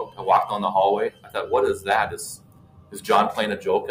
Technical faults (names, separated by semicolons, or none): noise suppressor applied to music or sounds; sound cut by the noise suppressor